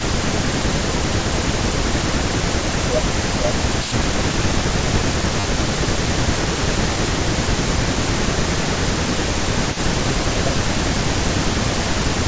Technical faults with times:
0.00-12.27 echo leak
0.43-4.93 speech suppressed in double talk
5.40-5.44 repeated buffer
6.12-7.86 speech suppressed in double talk
8.43-9.96 speech suppressed in double talk
10.32-11.50 speech suppressed in double talk

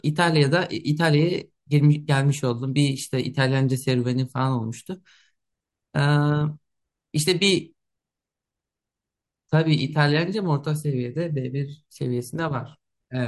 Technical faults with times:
none

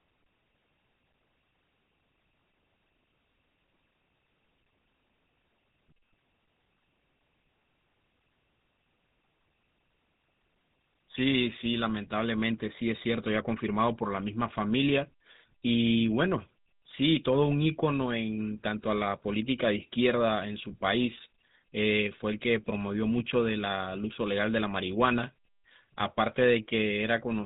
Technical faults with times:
0.00-27.45 GSM full-rate codec

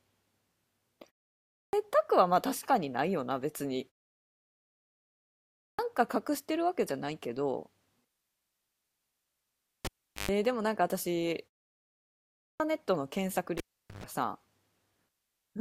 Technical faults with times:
1.35-1.73 clipped start after a pause
5.38-5.79 clipped start after a pause
12.20-12.60 clipped start after a pause

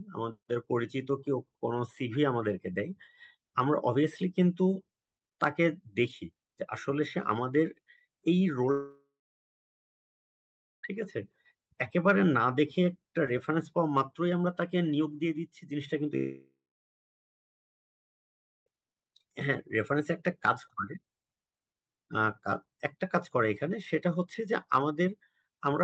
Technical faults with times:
8.71-10.85 long network dropout
16.17-18.68 long network dropout

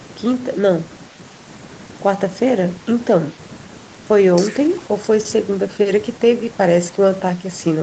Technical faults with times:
none

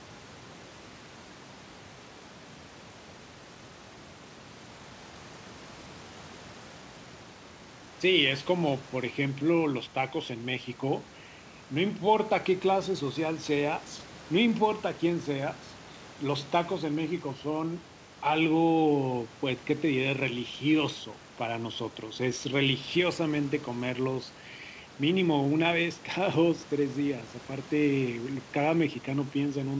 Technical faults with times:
none

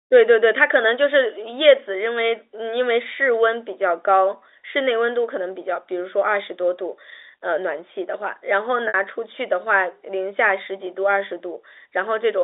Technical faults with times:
8.88-8.94 packet loss with pitch repetition

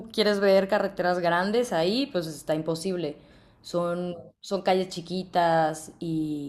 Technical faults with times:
none

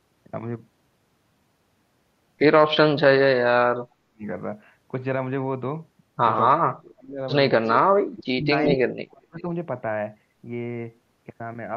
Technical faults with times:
3.32-4.26 speech suppressed in double talk
6.57-7.20 speech suppressed in double talk
7.65-7.69 echo leak
8.14-8.48 speech suppressed in double talk
8.63-8.77 echo leak
8.75-9.46 speech suppressed in double talk

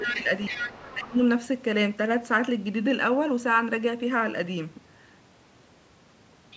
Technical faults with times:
0.00-0.62 speech suppressed in double talk
0.06-0.94 other side's voice leaking through
0.94-1.20 speech suppressed in double talk
1.19-1.23 other side's voice leaking through

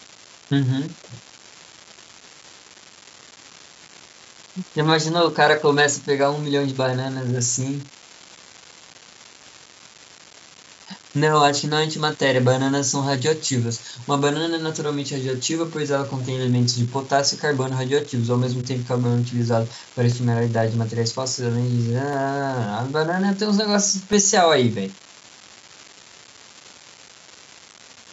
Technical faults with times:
0.00-28.13 unreliable data bit
18.11-26.13 periodic USB or driver dropouts

